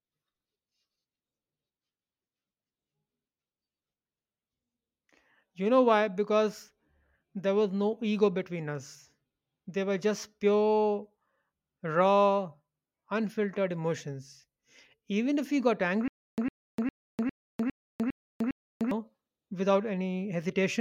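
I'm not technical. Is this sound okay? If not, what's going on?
No. There is a stutter with silent gaps from 16.08 to 18.91 seconds, just after "even if we got". A tiny snippet of the speech, about a tenth of a second long, plays seven times, each followed by about 0.3 seconds of dead silence, in a steady beat roughly every 0.4 seconds. The likely cause is playback or streaming stalling, replaying the last bit it had and then running dry. The speech meant for those seconds is lost.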